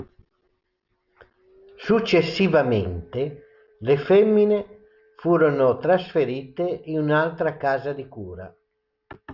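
No technical faults can be heard anywhere in the speech recording. There is nothing to mark at any point in time.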